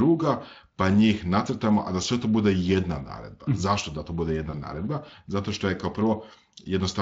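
At 4.51 s, right after "da to bude", there is a short dropout from VoIP packet loss concealed by the speech codec. About 20 ms of audio went missing, which fits a single lost frame. The decoder filled the gap by extending its last pitch and filter, with falling gain. The result is a brief stretched, fading smear until about 4.55 s. Recovery is not instant, since each frame builds on the one before. Around it, the Speex coding does only light damage.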